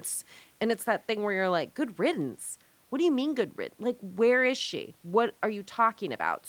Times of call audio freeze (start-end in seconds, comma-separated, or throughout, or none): none